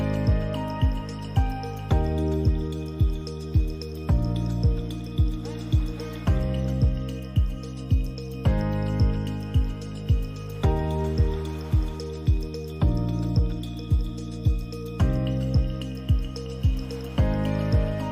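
No technical faults can be heard anywhere in this audio.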